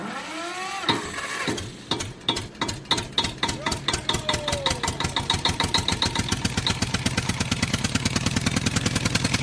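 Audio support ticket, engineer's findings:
No audio faults found on listening; nothing to attribute to any component.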